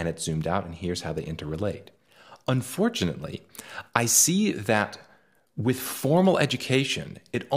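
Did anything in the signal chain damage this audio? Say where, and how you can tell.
No, nothing audible points to damage at any stage of the chain, from capture through to playback.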